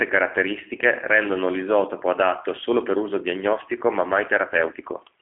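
Throughout the speech, G.729 codec damage is plainly audible. The sound is rebuilt from a vocal-tract filter, pitch predictor and a few pulses per frame, giving a rough, synthetic edge consistent with an 8 kbit/s stream. The band runs about 250 Hz to 3.4 kHz, with nothing above 3.7 kHz.

From 0.21 s to 5.15 s, word clock ticks recur at a steady rate of about one every 0.15 s, some forty in all. The receiving device runs unlocked from the sender, with a mismatch of roughly 150 ppm. Each slip drops or repeats one sample, producing a sharp tick of uneven strength.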